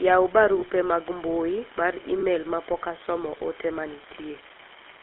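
Speech heard through the GSM full-rate codec, with its buzzy, gravelly roughness riding on every voiced sound. The band runs from about 300 Hz to 3.4 kHz, and the sound fits a 13 kbit/s codec. Unlike ordinary band-limiting, the grit comes from a pulse-train excitation that keeps only every third sample, so it follows the voice itself. Separately, an unreliable data bit adds a constant fine crackle made of equal-sized spikes from one marginal data line flipping at random. It is told apart from codec grain because it carries on through the pauses when nobody is talking. Lost GSM frames appear at 0.60 to 0.63 s and 2.20 to 2.23 s, each a single 20 ms frame. Each is held as a brief metallic ring from the repeated previous frame, not a silent gap or click.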